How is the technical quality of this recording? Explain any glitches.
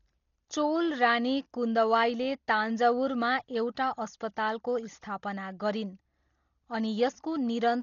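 Pretty rough, honestly. Throughout, there's likely heavy Dolby Digital compression, fitting roughly 32 kbps. The encoder cuts everything above 7 kHz and dither-fills starved bands, so speech sounds dull, rough and fluttery.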